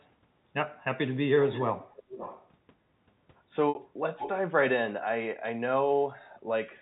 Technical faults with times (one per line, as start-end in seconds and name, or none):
0.00-0.05 echo leak
1.51-2.48 echo leak
3.69-3.75 packet loss with pitch repetition
4.18-4.30 echo leak